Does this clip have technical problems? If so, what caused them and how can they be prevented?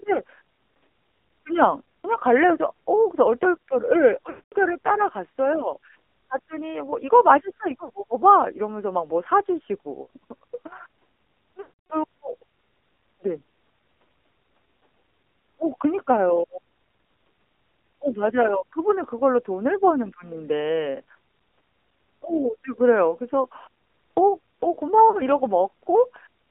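Yes. The AMR narrowband mobile codec confines the speech to roughly 250 Hz to 3.5 kHz and makes it plainly buzzy and synthetic. That pattern fits a low AMR-NB mode near 7.4 kbps. Plain band-limiting would dull the sound without adding this buzz. Using a wideband codec or a higher bitrate prevents it.

Lost AMR speech frames occur at 4.30–4.53 s (220 ms), 7.84–7.90, 10.02–10.08, 11.62–11.93 (280 ms) and 25.10–25.20 s. The decoder stretches the last sound and fades it, where a hard dropout would cut to silence. Better radio coverage prevents these losses.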